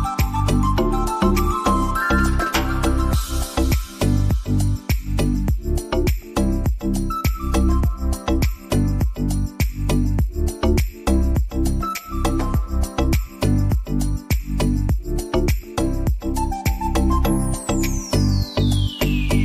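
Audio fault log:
No audible faults detected anywhere in this recording.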